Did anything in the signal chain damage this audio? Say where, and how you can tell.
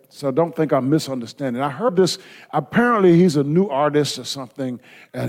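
Yes, at the codec: compressed frames skipped at 1.88 s, between "think I'm misunderstanding I" and "this apparently he's a". About seven 21.3 ms frames, roughly 150 ms, are gone. Unlike a network dropout, there is no silence gap; the audio simply jumps ahead.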